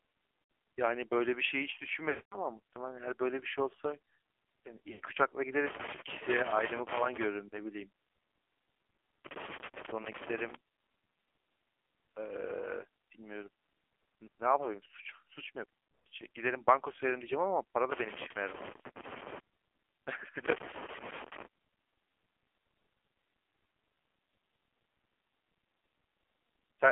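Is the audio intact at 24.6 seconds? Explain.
No. At 24.6 s the speech is still passing through the AMR narrowband mobile codec, which affects the whole clip. The codec models the vocal tract and drives it with a few pulses per 5 ms subframe, and the heavy buzzy, synthetic damage fits a low-rate mode around 5.9 kbps. On a spectrogram, energy is confined between 250 Hz and 3.4 kHz, with nothing above 4 kHz, and harmonics look smeared into blocky 20 ms frames.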